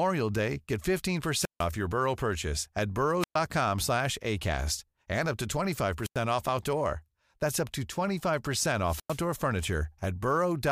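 Speech recorded on an analogue wireless mic, and it has four wireless microphone squelch dropouts: 1.33 to 1.68 s, 3.20 to 3.36 s just after "purchase at", 6.02 to 6.18 s between "and up to" and "off outdoor", and 8.81 to 9.27 s. Each time the RF fades, hiss swells, then the receiver's squelch slams shut for roughly 90 to 150 ms of near silence before the signal recovers.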